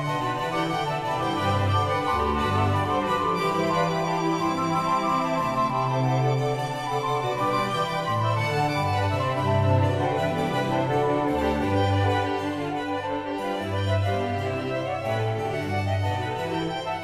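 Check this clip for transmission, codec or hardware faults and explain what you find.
Nothing wrong turned up here: no dropouts, glitches or damage anywhere in the audio.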